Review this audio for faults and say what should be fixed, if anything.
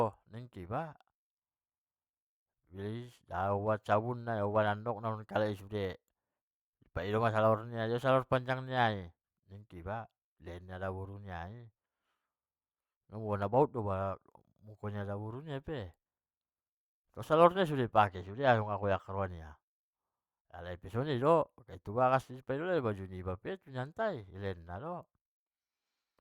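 Channel delay (comb filtering), from 18.07 to 19.24 s: one channel runs a couple of samples behind the other, a few hundredths of a millisecond. When the two are summed to mono, the shared content cancels near 10 kHz, so the speech loses its upper treble and sounds dull. To prevent this, keep both channels sample-aligned through every buffer and processing stage, and check phase correlation before any stereo-to-mono fold-down.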